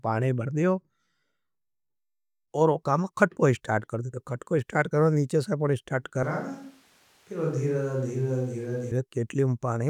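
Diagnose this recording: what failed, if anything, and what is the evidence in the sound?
Switch to a distant microphone, 6.23 s to 8.91 s: the speech abruptly turns roomy and hollow, loses low end and drops by about 5 dB, while background room noise rises to roughly 30 dB below the speech. It returns just as suddenly at 8.91 s. The failure is likely at the capture stage, in the analogue wiring of the close microphone, with the recording falling back to a farther pickup that hears more of the room than the talker.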